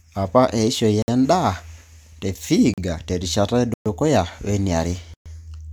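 The speech drops out four times, each one a block of digital silence: about 57 ms at 1.02 s, 40 ms at 2.74 s, then 120 ms at 3.74 s and again at 5.14 s. The sound simply cuts out and back with no fade. The short gaps come across as brief holes, and the two 120 ms ones are real holes in the speech. The likely cause is the output buffer not getting filled in time.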